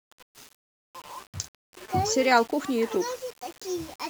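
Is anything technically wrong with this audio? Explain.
Yes. Throughout the speech there is low bit depth without dither. The audio was likely requantised to about 7 bits by simple rounding, with no dither to break up the error. Because the rounding error tracks the waveform rather than forming steady hiss, it is heard as a grainy, buzzy distortion sitting roughly 25 dB below the signal, changing character with the speech and turning quieter passages and decays gritty and sputtery.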